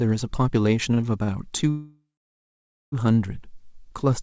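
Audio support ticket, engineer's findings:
Repeated stalls (stutter), 0.94 to 1.30 s: four short holds, longest 48 ms, about 0.1 s of filler in total. Jitter buffer repeatedly underran on late packets; receiver stretched the last sound each time. Nothing lost, delivery drags.

Call audio freeze, 1.70 to 2.94 s: 1.22 s hold; brief continued buzz decaying to 0.88 s of silence, then resumes where it stopped. Likely a long packet hold-up emptying the jitter buffer. No content missing, gap inserted. Band stops at 8 kHz, consistent with G.722.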